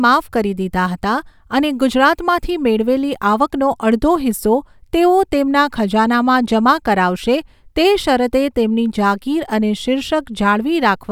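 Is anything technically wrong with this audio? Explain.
No, there are no faults.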